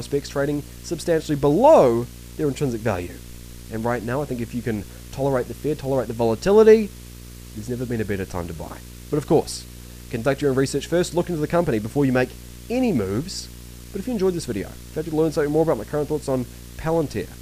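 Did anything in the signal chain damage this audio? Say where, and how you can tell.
Yes. Video or display buzz is coupling into the analogue wiring throughout the clip. A steady buzz at the 59.94 Hz field rate, with hash above it and a 15.7 kHz line-rate whine, sits roughly 15 dB below the programme, coming from a nearby screen or video cable.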